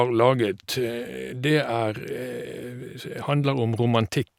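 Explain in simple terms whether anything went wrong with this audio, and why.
Nothing went wrong with this audio, because no fault can be heard anywhere in the recording.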